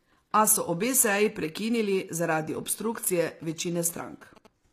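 HE-AAC compression, throughout: the treble sounds synthetic and gritty, with nothing above 14.9 kHz, likely from spectral band replication copying lower bands upward at around 24 kbps. GSM signalling bursts, 2.95 to 4.47 s: a nearby 2G phone's radio bursts are rectified into a galloping pattern of short 217 Hz buzzes, well below the speech.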